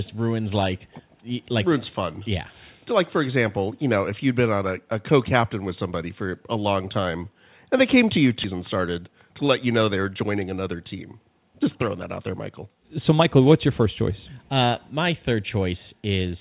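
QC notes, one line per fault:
8.44–8.46 s, skip ahead: right after "they came to you" about a second of audio is gone, and the two sides are butted together with no gap.
8.53–10.68 s, jitter buffer speed-up: tiny pitch-period slices are cut repeatedly to drain the backed-up buffer, so it runs about 9% fast at unchanged pitch and sounds rushed.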